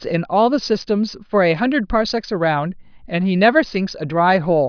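No technical faults are audible.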